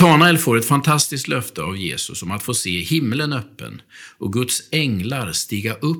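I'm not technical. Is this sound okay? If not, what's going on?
No. The opening, up to about 0.28 s before "får ett", sounds harsh and crackly. This is microphone overload, likely from input set so high that the loudest peaks get chopped off.

The voice also drops suddenly quieter twice, at 0.02 s and again at 1.02 s between "får ett" and "löfte av". This is the microphone volume being stepped down, likely by the call software reacting to the loudness.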